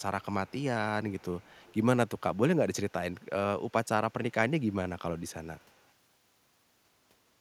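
Echo leak at 0.21–0.25, 0.47–0.64, 1.09–1.76, 2.07–2.38, 3.2–3.26, 3.69–3.88, 4.6–4.73 and 5.18–5.87 s: a faint copy of the speech trails it by about 201 ms, about 30–40 dB down. This is likely residual loudspeaker pickup that the far end's echo canceller failed to suppress.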